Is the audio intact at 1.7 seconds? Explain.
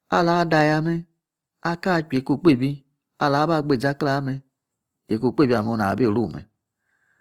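No. At 1.7 seconds the speech carries the same damage heard across the whole clip, most likely from Opus compression at a low rate, consistent with about 24 kbps. The full bandwidth is kept, but with too few bits for detail the encoder fills bands with noise or copies of lower bands, so the voice turns rough and grainy. Unlike MP3 compression, it swirls less and leaves few watery spectral holes.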